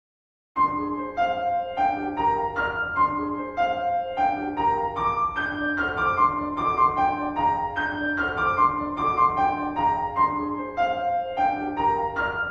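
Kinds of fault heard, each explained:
Nothing stood out on listening to the audio.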